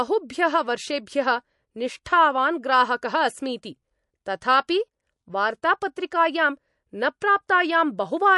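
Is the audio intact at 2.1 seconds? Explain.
No. Pre-echo sits at 2.05 s, just before "ग्राहकः अस्मीति". The transform codec spread quantisation noise across its whole block, so noise scaled for the sharp attack leaks about 10 ms ahead of it. A brief hiss precedes the onset, which sounds softened and smeared.

MP3 compression affects this moment as well, as it does the whole clip. Nothing is present above 11.3 kHz, and weak frequency components flicker in and out between frames. The result is a plainly audible watery, swirly texture with dulled treble, likely from MP3 encoding at a low bitrate around 48 kbps.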